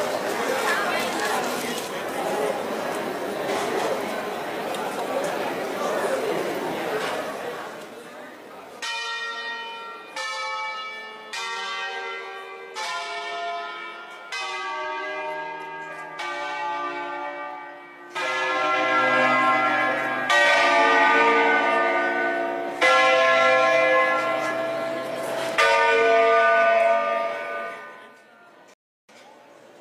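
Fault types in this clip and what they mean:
rebuffering stall: playback starves of downloaded data near 28.74 s, leaving a flat silent gap in the waveform and a blank spectrogram band, adding 0.35 s before resuming seamlessly.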